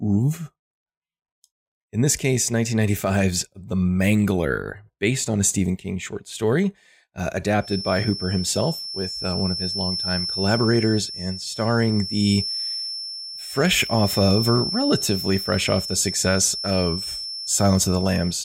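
From 7.58 s, after "short story uh", a 5.4 kHz feedback whistle sits about 10 dB under the speech, likely a speaker-to-microphone loop near instability.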